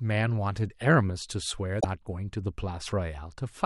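At 1.77 s, damaged data in a compressed stream causes a brief glitch lasting 80 ms. The decoder loses sync on corrupted frames, then recovers at the next header.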